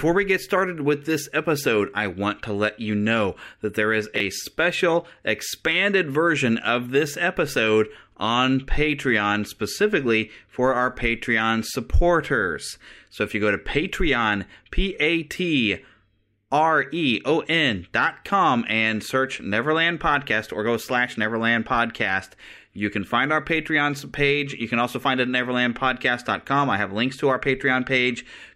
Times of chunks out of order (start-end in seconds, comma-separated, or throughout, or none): 4.16-4.20